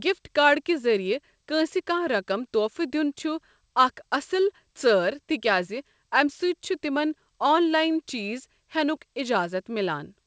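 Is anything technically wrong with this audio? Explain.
No, nothing in this speech recording points to a technical fault. It comes through a WebRTC call path, and the absence of any content above about 8 kHz fits a wideband call codec such as G.722.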